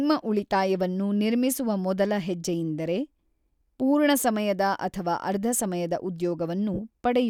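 At 6.74 to 6.79 s, lost LE Audio frames, about 45 ms (roughly six frames), make the LC3 decoder repeat the last spectrum with random signs, fading it: a brief noisy smear, with blurred harmonics on a spectrogram.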